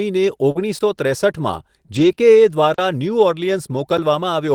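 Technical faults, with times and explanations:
0.51–0.57 s, short concealed packet loss: about 40 ms of speech arrived too late to decode. The receiver extended the preceding sound to fill the hole, giving a brief smear before blending back.
0.55–0.61 s, lost packet rebuilt from error correction: 40 ms of lost audio were replaced by the low-bitrate copies carried in following packets, which fits two lost packets. These frames sound rougher and noisier, with no gap.
0.79–0.81 s, block of digital silence: the output was zeroed for 20 ms. The abrupt cut and return leave a tiny hole.
1.95–2.13 s, lost packet rebuilt from error correction: 100 ms were rebuilt from embedded low-bitrate redundancy, consistent with several lost packets. The speech turns grainy and noisy across that stretch.
2.15–2.19 s, short concealed packet loss: 20 ms never reached the decoder. Extrapolating the previous sound covered it, leaving a short wobble.
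2.74–2.78 s, block of digital silence: 40 ms of samples were zeroed with no fade. The result is an audible dropout.
3.97 s, block of digital silence: a 10 ms zeroed block cuts the signal to nothing and straight back, heard as a single tick.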